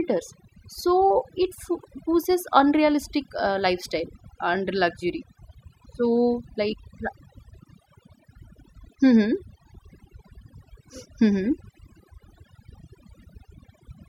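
Overdone noise removal runs through the whole speech clip. The noise reduction was set too strong. It cuts frequency bands near the noise floor, and quiet parts of the voice go too. The background drops and breaks up into twinkling specks.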